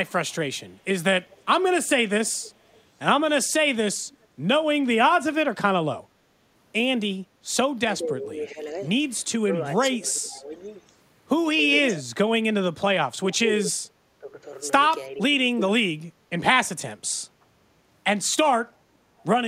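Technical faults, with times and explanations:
1.30–4.26 s, 9.96–13.50 s and 19.19–19.25 s, echo leak: a delayed copy of the speech trails it, 417 ms behind and about 30 dB down at first, then 459 ms behind at about 15 dB and about 35 dB down. This is likely a far-end loudspeaker echo the canceller failed to remove.
8.02–15.23 s, speech suppressed in double talk: the talker's speech dips and drops out in pieces, by up to about 25 dB and for about three seconds in total, while the other side is also talking. The likely cause is an echo canceller mistaking the talker for echo and attenuating both.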